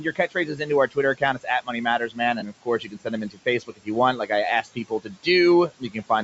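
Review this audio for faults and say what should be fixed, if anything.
Soft consonants and word endings sound swallowed and faint through the first 4.3 seconds, losing about a second and a half of speech in total, and again from 4.62 to 5.27 s and from 5.69 to 6.1 s. At worst the sound drops by about 18 dB. This is speech cut by the noise suppressor: it judged quiet speech to be background and turned it down along with the room noise. To prevent it, lower the suppressor's aggressiveness or raise its speech-protection threshold so low-level speech is not classed as noise.

A brief smeared, phasey patch sits at 2.40 to 2.43 s. That is AAC frame loss with concealment. About 20 ms of coded audio never arrived, which fits two short low-delay frames, and the decoder filled the gap by rebuilding a guess from the last good spectrum rather than leaving silence. The guessed spectrum doesn't match the real sound, so the patch smears. 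The light roughness of the low-delay AAC encoding, likely AAC-ELD, plays no part in this dropout. To prevent it, add jitter buffering or forward error correction on the transport so frames are not dropped.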